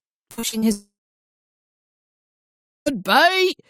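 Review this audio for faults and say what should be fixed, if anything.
From 0.31 to 0.64 s there is repeated packet loss with a robotic sound. Four separate holes open in the stream, the longest about 60 ms, and each is patched by stretching the preceding audio forward. Roughly half of that third of a second is synthetic fill rather than real signal, so the passage turns choppy, with fragments missing between the patches. Adding forward error correction and a slightly deeper adaptive jitter buffer would let the receiver recover isolated losses like these.

A long network dropout follows from 0.72 to 2.88 s. The receiver first extends the last sound as a brief decaying buzz or hiss, then gives up, and about 1.94 s of near-silence follows before audio resumes. The material from that window never returns; playback simply picks up at the later point. The likely cause is a complete interruption of packet delivery rather than local processing. 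Preventing this means fixing link stability on the sending or network side, for example with redundant paths or reconnect-and-resend logic.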